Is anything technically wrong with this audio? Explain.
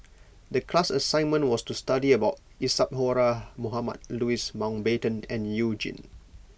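No, nothing technically wrong here.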